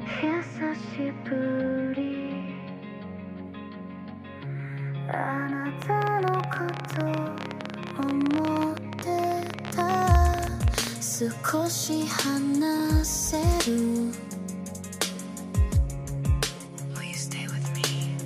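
From 5.82 s to 10.88 s, something in the chain was likely injecting a repeated pulse, whether interference from nearby equipment, a faulty connection or a failing power supply. The result is a train of clicks: some 70 similar pops at about 16.2 per second, spaced unevenly, standing roughly 15 dB above the surrounding sound. They register as a rapid, irregular ticking laid over the audio, carrying on through any gaps until it stops at 10.88 s.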